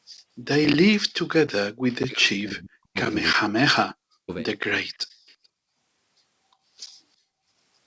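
From 1.79 to 2.98 s and again from 3.33 to 4.31 s, the speech sinks by as much as about 40 dB for roughly a second each time. This is likely speech suppressed in double talk, where an echo canceller mistook the talker for loudspeaker echo.

At 4.93 to 4.98 s and 5.27 to 5.35 s, brief faint copies of the talker appear about 35 dB down, 354 ms late. This is likely echo leak. The fixed delay and the distinct repeat set it apart from room reverberation.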